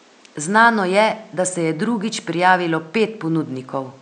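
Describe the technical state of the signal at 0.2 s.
At 0.2 s the signal is intact, with only the room's own background noise sitting about 34 dB below the speech.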